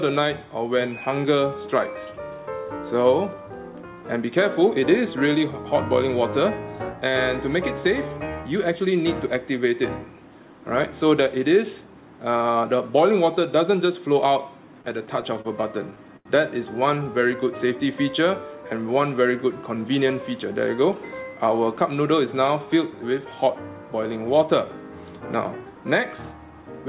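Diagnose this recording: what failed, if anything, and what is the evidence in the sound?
Repeated stalls (stutter) occur in the network and jitter-buffer stage between 14.82 and 15.47 s. Packets arrived late, so the buffer ran dry five times. The receiver held the last sound across about 85 ms in total, with the longest hold 36 ms, roughly 13% of that span. Nothing is lost, but the audio drags and stutters.

A short stall from a late packet occurs at 16.17 to 16.27 s, in the same network and jitter-buffer stage. One packet missed its slot, and the receiver stretched the preceding sound for 87 ms until it arrived, then resumed where it left off. That added 87 ms of delay, heard as a held sound with a slight buzz or dip.

A jitter buffer speed-up runs from 19.78 to 20.46 s as the buffer drains excess held audio. It cuts repeated pitch-period-length slices, around 40 ms in all, so the sound runs at 106% speed with unchanged pitch and comes across as hurried. 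The whole clip is band-limited to 4 kHz, which fits a G.711 mu-law call path.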